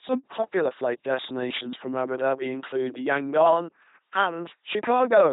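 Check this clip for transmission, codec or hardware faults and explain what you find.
There is one fault, running through the whole clip: heavy LPC-10 vocoder damage. The speech comes out buzzy and robotic, with hiss where voicing was misjudged and nothing above 3.9 kHz. Each moment is rebuilt from a simple filter driven by either pulses or noise, which fits a 2.4 kbit/s rate.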